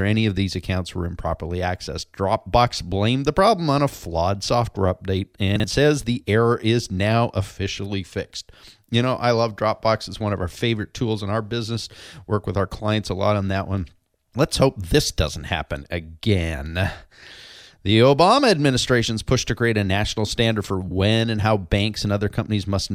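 A speech recording with one fault: chunks out of order, from 5.56 to 5.64 s, between "a flawed software update" and "says the error". One 40 ms chunk plays a chunk late, after the one that should follow it. Nothing is missing. The swapped order causes a brief jumbled moment, with three hard joins.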